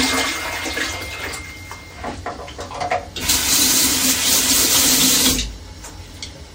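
No technical faults are audible.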